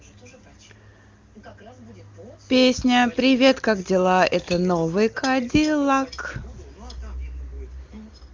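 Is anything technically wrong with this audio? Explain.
No, this speech comes through the AMR wideband (HD Voice) codec at its top rate of 23.85 kbit/s, where any coding damage is faint at most, so nothing in the signal calls for correction.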